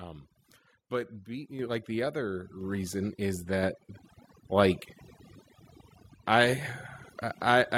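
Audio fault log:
Throughout: overdone noise removal. Bands near the noise estimate are gated away, so the background leaves twinkling specks; the spectrogram shows patchy dropouts.
1.6 s and 2.6 s: microphone volume stepped up. The input gain jumps about 6 dB just before "like the", then about 4 dB more, lifting voice and background together; each shows as a sudden waveform step.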